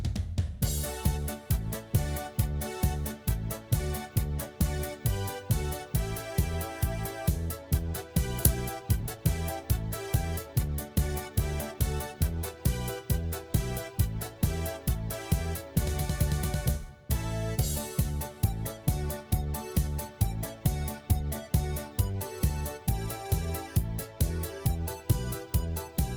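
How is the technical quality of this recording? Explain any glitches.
The recording has two kinds of glitches.

A skip ahead occurs at 8.43 s. Roughly 0.7 s of audio was dropped while later audio was already queued. Playback jumps forward with no gap filled. The two sides join almost directly, so the sound lurches abruptly.

Jitter buffer speed-up follows at 8.81 to 9.18 s (120% speed), 10.46 to 11.30 s (111%) and 11.74 to 12.15 s (110%). The buffer was overfull. It trimmed short pitch-period pieces, roughly a tenth of a second at most each time. The sound runs hurried at unchanged pitch.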